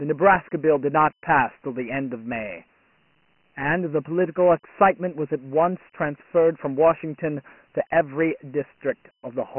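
From the first moment to the end, the speech carries Dialogic VOX ADPCM damage, and it's heavy. Each sample's change is squeezed into a 4-bit code scaled by an adaptive step size, so the coder keeps overshooting and lagging, leaving a gritty hiss that rides along behind the voice. The top is cut sharply: nothing above 3 kHz, which fits a 6 kHz sample rate at about 24 kbps. The bottom thins out below 150 Hz, giving that boxed-in phone-menu sound.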